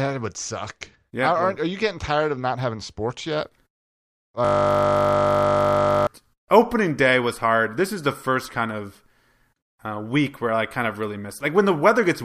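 From 4.45 to 6.07 s there's a system hang loop: the machine froze while the audio hardware kept replaying one 20 ms slice of its buffer, about eighty times over, so the speech turns into a steady 50 Hz buzz until "opening day was hard" picks back up.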